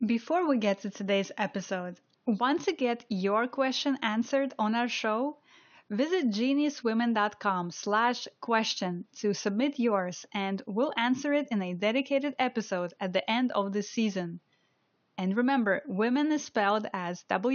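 No technical faults can be heard anywhere in the speech, and the only background is the room's own ambient sound, sitting about 45 dB below the voice as part of the original recording.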